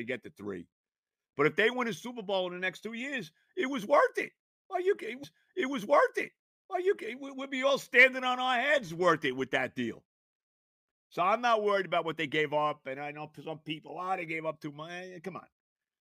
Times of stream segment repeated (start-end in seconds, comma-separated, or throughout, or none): 5.23-7.22